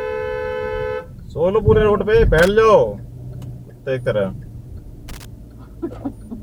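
At 2.39 s there's a short burst of loose connector crackle, lasting about 90 ms, and it comes back at 5.08 s for a bit longer, roughly 170 ms, ending around 5.25 s. What's going on is a worn or dirty contact somewhere in the chain making and breaking as it shifts, so the signal gets chopped on and off. You hear it as an irregular scratchy crackle laid over the sound.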